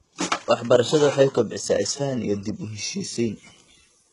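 From the start, the speech has a gritty, metallic treble: s sounds come out lispy, and nothing is heard above about 11.1 kHz. This is most likely HE-AAC compression at a very low rate, which fits roughly 12 kbps with heavy codec damage. The codec keeps only the lower band and synthesises the top by copying lower bands upward under a coarse envelope, so the rebuilt treble is not the original and its harmonics don't line up with those below.

From 2.80 s to the end at 4.13 s, a steady, thin hiss sits under the speech, climbing sharply toward the top of the band and lying roughly 30 dB below the speech. This is low bit depth with noise shaping. The signal is held to only a few bits, consistent with around 10, and the rounding error is pushed upward in frequency, so the noise gathers in the treble.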